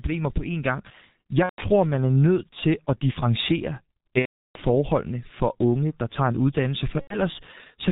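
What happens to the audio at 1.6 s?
At 1.6 s the sound is inside a burst of VoIP packet loss concealed by the speech codec, running from 1.43 to 1.63 s, just before "man er nødt til". The decoder lacked incoming data and stretched its last pitch and filter while fading the gain. The gap starts as a buzzy tone or a coloured noise that fades, then goes silent from the third lost frame. About 150 ms went missing, which fits five lost 30 ms frames.

The G.723.1 codec also shapes this moment, as it does the whole clip. Its 30 ms frames and slow voice model leave the speech muffled and hoarse, with nothing above 4 kHz and smeared consonants. The damage is heavy, which fits the 6.3 kbit/s mode.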